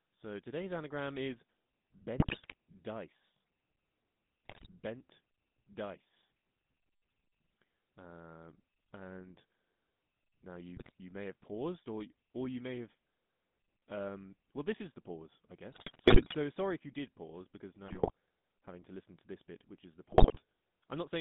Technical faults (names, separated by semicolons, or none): GSM full-rate codec; GSM bit errors